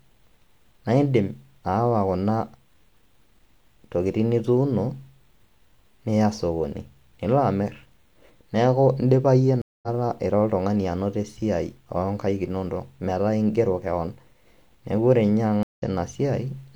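At 9.62 s and again at 15.63 s, a stream reconnect: the speech drops out for 210 ms, then 148 ms, and picks up about 150 ms further along each time.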